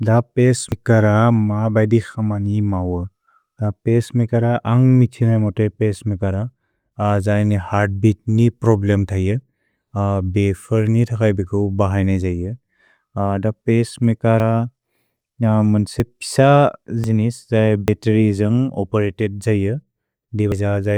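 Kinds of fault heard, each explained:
Dropped buffer (overrun): the speech skips ahead six times, once near the start and five times in the last seven seconds, each losing roughly 40 to 100 ms with no silence. Likely the samples went unread before the hardware overwrote them.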